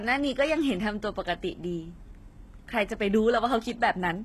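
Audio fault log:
Throughout, HE-AAC compression: the speech has a plainly audible coded quality, with nothing above about 12.3 kHz, and the sound points to a low bitrate near 16 kbps. The likely cause is HE-AAC, where the codec keeps only the lower spectrum and synthesises the treble by copying lower bands upward under a coarse envelope. The rebuilt top end has brightness but not the original detail, so sibilants come out gritty, metallic or lisping.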